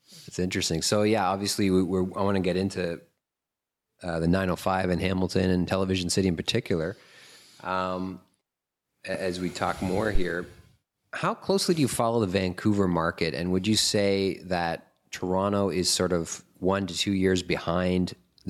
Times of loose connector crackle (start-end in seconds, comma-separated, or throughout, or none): none